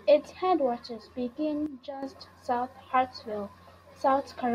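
At 1.66 s, speech and background noise drop together by about 10 dB until 2.03 s, just before "south of". This sudden gain jump likely comes from an unramped digital gain change. The waveform envelope steps down abruptly, and the spectrogram dims evenly across all frequencies.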